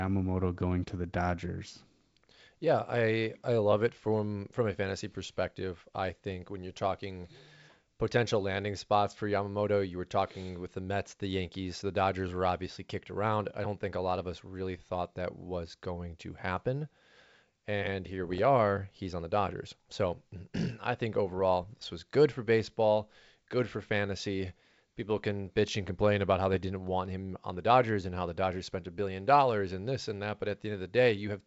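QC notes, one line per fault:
7.24–7.32 s, 18.24–18.40 s, 21.28–21.41 s, 26.54–26.63 s, bit errors on an ADPCM link: short bursts of popping and rough crackle with brief jumps in level, the first just after "think when you're talking", another between "I think" and "this was good for", the last between "complain about how they" and "want him on the". Scattered flipped bits, a small fraction of a percent, knock the decoder's step size and prediction off track, so each error rings on for milliseconds. The clean G.722 wideband sound around the bursts suggests a 64 kbit/s link.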